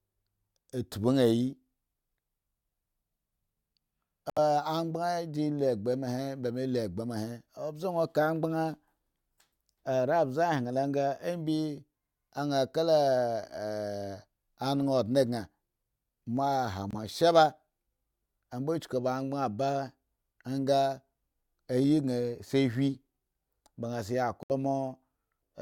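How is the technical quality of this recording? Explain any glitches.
The speech is interrupted by three short gaps that are likely Bluetooth dropouts, at 4.30 to 4.39 s, 16.91 to 16.94 s and 24.43 to 24.52 s. The speech cuts to abrupt silence for roughly 70 ms, then 23 ms, then 70 ms again, which fits whole wireless audio frames of about 23 ms each arriving too late to play. Unlike a buffer underrun, which pauses and then continues, the speech comes back further along, with the missing stretch simply gone.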